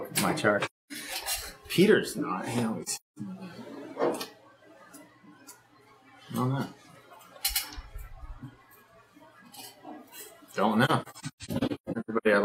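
Soft-edged holes open in the sound at 0.65–0.93 s; at 2.83–3.19 s, as broken gaps, the longest about a fifth of a second; and at 10.85–12.27 s, as scattered gaps, the longest around 150 ms. This is AAC frame loss with muting: missing frames decode as silence, with overlapping windows fading the sound out and back in.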